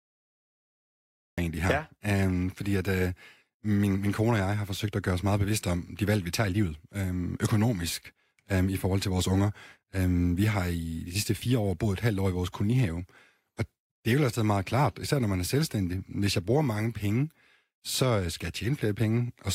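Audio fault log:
0.00–1.38 s, cut-off start: capture began late, leaving digital silence until the speech bursts in mid-sound at 1.38 s on "egentlig her", with no natural attack.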